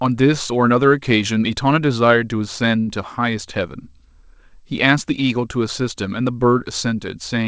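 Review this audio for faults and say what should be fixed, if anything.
Clock drift buffer slips: about four brief clicks recur every 1.95 s between 0.35 s and 6.27 s, each a small discontinuity in the speech. The steady spacing points to a buffer slowly filling or draining until a few tens of samples are dropped or repeated. The likely cause is two devices on independent clocks, with a mismatch of a few hundred ppm. Prevention: lock both devices to a common clock, or add adaptive resampling at the buffer.

Short stall from a late packet: from 2.80 s to 2.89 s, the sound is held for 72 ms. A packet arrived late, the jitter buffer ran dry, and the receiver stretched the last audio until the packet came. Playback then resumed from the same point, so nothing is lost, but the delay grows by 72 ms. Prevention: increase jitter-buffer depth or improve network delay stability on this G.722 call path, whose band stops at 8 kHz.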